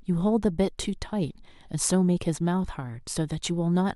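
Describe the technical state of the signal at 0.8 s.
At 0.8 s the speech signal is intact, with no audible technical fault at that moment.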